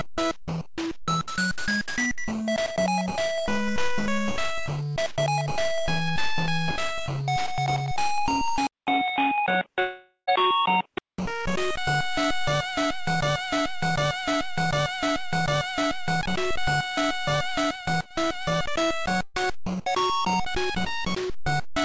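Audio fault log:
8.67–11.18 s, input switched to a poorer device: sound abruptly dulls, with nothing above 3.8 kHz, a 200 ms silence at the switch, and faint new noise. The band narrowing and then reopening is what marks this as a likely device change rather than the call codec, which passes up to 8 kHz throughout.
9.80–10.29 s, long network dropout: about 480 ms of audio is lost. The last sound is stretched into a fading buzz, ending in about 90 ms of silence. A likely network gap, told apart from a loop because nothing repeats.
13.22–16.23 s, broken-record loop: the same 0.75 s fragment repeats exactly, back to back, four times, likely a stalled stream resending its last buffer. Identical repeats distinguish it from a dropout's fade.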